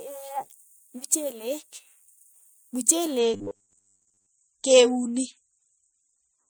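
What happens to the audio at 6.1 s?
At 6.1 s the speech carries more codec artefacts. This is an adaptive stream at a lower bitrate, running from 3.18 s to the end: the stream switched abruptly, without a gap, to a much lighter encode, which fits a drop from around 128 to 33 kbit/s MP3.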